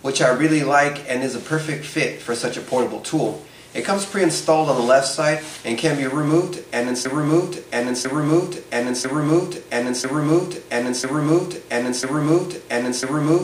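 A broken-record loop starts at 7.05 s and runs to the end of the clip: a fragment of about 1.0 s (996 ms) plays six times back to back with no change between repeats. The pattern points to a stall, likely in the player, encoder or stream, which kept sending the last fragment it held instead of new audio. Whatever should have played after 7.05 s is missing from the clip.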